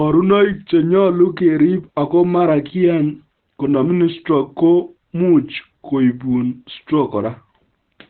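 Opus compression, throughout: nothing sounds above 4.3 kHz, leaving the speech muffled and hoarse, likely from its narrowband speech mode at a rate fitting about 12 kbps.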